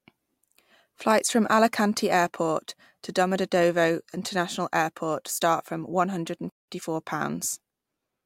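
At 6.49 s, right after "start from one hundred", the speech cuts out in mid-flow and returns at 6.69 s. This is a playback stall: the output goes silent for about 180 ms, most likely because the player ran short of data or its thread was held up. On a waveform it shows as a flat gap between two abrupt edges, and on a spectrogram as a dark vertical band across all frequencies.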